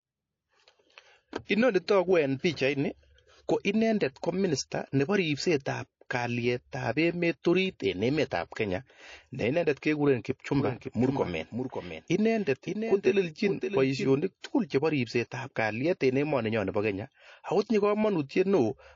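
The whole clip has that watery, swirly top end with a dulled treble. That's MP3 compression, likely at a starved rate around 32 kbps, zeroing weak frequency lines frame to frame.

At 1.45, 8.48 and 14.40 s you get pre-echo: a hiss lasting 46, 39 and 27 ms, about 19, 15 and 24 dB up, smearing each attack because the encoder never switched to short blocks.

From 10.60 to 14.16 s there's a doubled audio track, likely a second capture path, with a dry copy roughly half a second behind and a few dB quieter that starts and stops abruptly.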